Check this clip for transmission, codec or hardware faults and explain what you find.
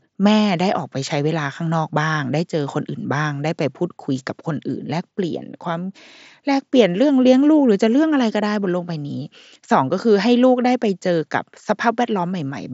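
Nothing here needs fixing; the speech comes over a Bluetooth mSBC headset link working as it should, with content stopping around 7.7 kHz and only the light graininess that codec normally leaves on louder sounds.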